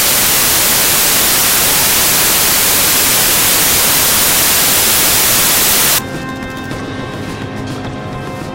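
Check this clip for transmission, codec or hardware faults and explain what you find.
Samples built from the wrong bytes run from the start to 5.99 s. The reader is assembling each sample from its bytes incorrectly, whether shifted by one byte, in swapped order or at the wrong alignment, so the rapidly fluctuating low-order bits end up as the most significant part of every value. The result is loud, harsh broadband noise over that span.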